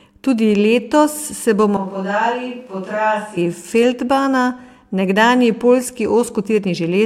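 A speech recording in which, from 1.77 to 3.37 s, the close microphone's feed was likely lost and a switch to a distant microphone took over, so the voice abruptly turns hollow, roomy and thin in the bass, drops about 5 dB, and brings up room noise roughly 35 dB below the speech, before snapping back to the close sound.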